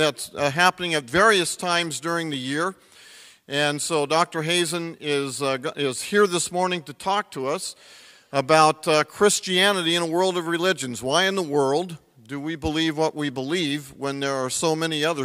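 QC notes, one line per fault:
No faults found on review; nothing to log.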